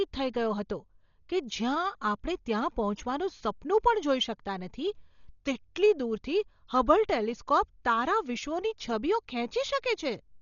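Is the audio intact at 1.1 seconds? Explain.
No. At 1.1 seconds, as throughout the speech, nothing reaches above 7 kHz and the sound is dull, with rough, fluttering noise around tones. This is likely Dolby Digital compression under heavy strain: the encoder narrowed the band and starved many frequency lines of bits, which fits a rate near 40 kbps.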